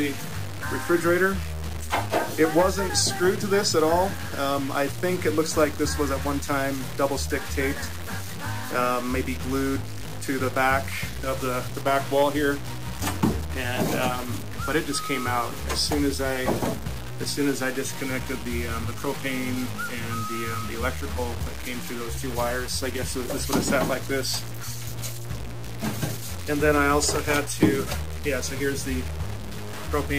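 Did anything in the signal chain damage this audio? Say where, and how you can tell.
Yes. Low bit depth without dither runs throughout: grainy distortion tracks the sound, and the quietest passages sputter or drop out, unlike steady hiss. The likely cause is truncation to about 5 bits during sample-format conversion.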